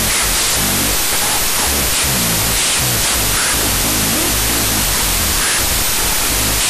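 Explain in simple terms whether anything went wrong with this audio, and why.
Something went wrong for the whole clip, from the first moment to the last: a wrong sample width fault. The speech is buried under loud, harsh noise and plays at half speed, so it sounds an octave low and dragged out. This fits 32-bit float audio being read as 16-bit integers. Each stored value gets split into two pieces, doubling the number of values. Most pieces become noise, and only some still follow the real waveform.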